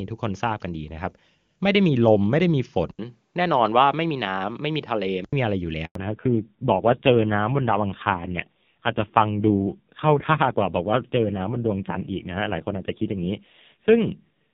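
At 2.91 s the sound goes dull and boxy after a brief 80 ms silence, with nothing above 5.6 kHz and a faint new noise floor roughly 50 dB down at an unchanged level. This is likely an input switched to a poorer device, and it clears at 5.33 s.

A handover gap follows from 5.85 to 5.95 s. The signal dies away abruptly and leaves 100 ms of silence while the call moves between networks. No speech frames arrive during the switch, so that stretch of audio is simply lost.

From 5.95 s to the end there is a fallback to narrowband. The earlier AMR wideband (HD Voice) stretch sounds clean, consistent with its highest rate, but now everything above 4 kHz disappears. The rough, grainy texture points to a low-rate AMR-NB mode near 5.9 kbit/s.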